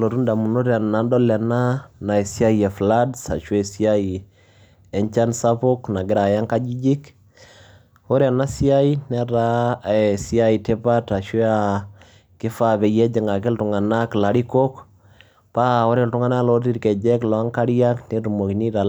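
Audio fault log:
No audible faults detected.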